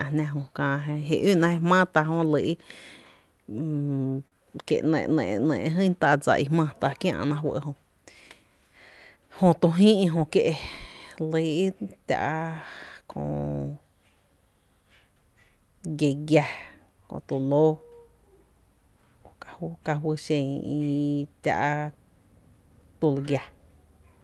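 At 4.27 s the speech briefly hangs in a short stall from a late packet. A packet arrived too late, the jitter buffer ran dry, and the receiver stretched the last sound for about 43 ms before resuming from the same point, so nothing is lost but the delay grows by 43 ms. It is heard as one held sound with a faint buzz or dip. On a spectrogram the harmonics run flat and unchanging through 4.27–4.35 s, and the waveform shows repeated, slightly decaying cycles.

From 9.16 to 9.73 s comes a jitter buffer speed-up. Too much audio had piled up in the buffer, so the receiver removed short pitch-period slices again and again, about 50 ms in all, playing the speech at roughly 109% speed at unchanged pitch. It sounds slightly rushed. On the waveform the cycles look continuous but syllables are compressed in time, while spectrogram harmonic spacing stays the same. Throughout, the call codec's upper band ends near 12 kHz, which fits Opus at around 40 kbps.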